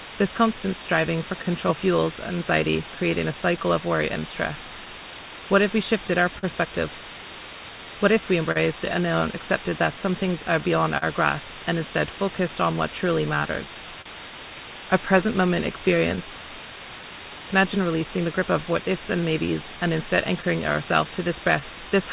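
From the start, a steady, even hiss sits under everything at only about 10 dB below the signal. That's low bit depth with dither: the audio is rounded to roughly 5 bits, and the dither turns the rounding error into flat white noise instead of grainy distortion.

Also throughout, there's clock drift between sender and receiver. The sender's clock runs roughly 3% slow, so the receiver's jitter buffer keeps draining and has to be topped up to stay in step.

You hear that as repeated timing corrections from 0.23 s to 21.91 s. The receiver keeps stretching out short pieces, playing at about 98% speed overall and adding something like 0.4 s in total. The edits are small, uneven and all lengthening, so the tempo feels slightly unsteady.

Between 3.32 s and 6.45 s come scattered short gaps. About five packets arrived late and each hole was patched by carrying the last sound forward, none longer than about 40 ms. 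Nothing is lost, just brief ticks and smears.

At 8.52 to 8.57 s there's a short stall from a late packet. The buffer ran dry, so the receiver held the previous sound for 37 ms and then carried on from the same spot. You hear a brief drawn-out moment with a slight buzz or dip.

From 10.36 s to 21.07 s the scattered short gaps return, roughly fifteen of them this time, each up to about 40 ms. Together they make a sprinkling of tiny hiccups across that stretch. All of this rides on a call path with nothing above 4 kHz, which fits G.711 mu-law at 64 kbps.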